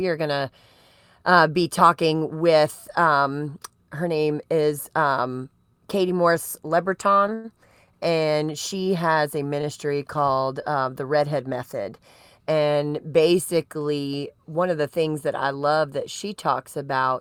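At 7.34 to 7.47 s, just before "and she has a", there's a short stall from a late packet. The jitter buffer ran dry, so the receiver held the last sound for about 98 ms until the data showed up, then picked up where it left off. It's a smeared, slightly buzzy hang. A smaller one hits at 9.61 to 9.66 s, between "and she has a" and "called uh the", with a brief 20 ms hold. Nothing is lost in either spot.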